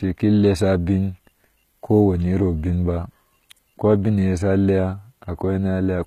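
From start to finish, the treble sounds rebuilt rather than captured. Nothing reaches above 14.9 kHz. S sounds turn gritty and lispy. This is likely HE-AAC compression, copying low bands upward, and the damage fits a bitrate near 20 kbps.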